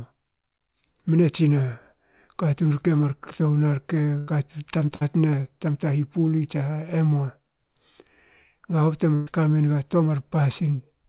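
Bursts of packet loss occur at 4.18–4.30 s, 4.96–5.03 s and 9.15–9.29 s, just before "kamenga toa". The receiver stretches the last sound into a held buzz or fading hiss, shown as smeared, decaying energy, then jumps ahead.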